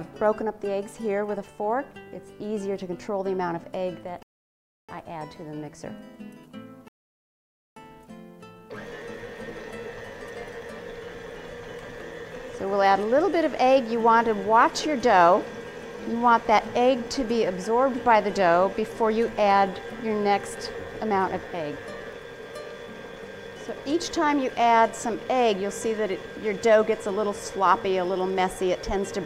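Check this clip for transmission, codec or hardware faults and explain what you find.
Two rebuffering stalls interrupt the audio, at 4.23 s (0.66 s long) and 6.88 s (0.88 s long). The player runs out of downloaded data, falls silent, then resumes exactly where it stopped. Unlike a dropout, no sound is skipped; only time is added.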